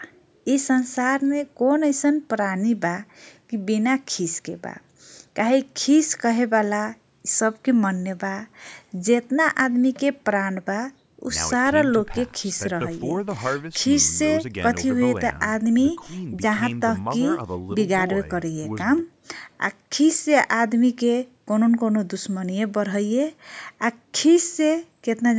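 Speech, with no technical faults to report.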